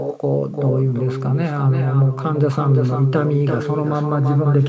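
Throughout the speech, an echo with no canceller returns each phrase about a third of a second later, roughly 8 dB quieter: a distinct delayed copy rather than smooth room reverberation.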